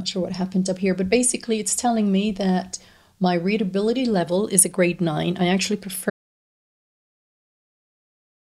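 The input was likely lost, leaving the recorder writing silence: an audio dropout to silence from 6.1 s to the end, with no room tone remaining.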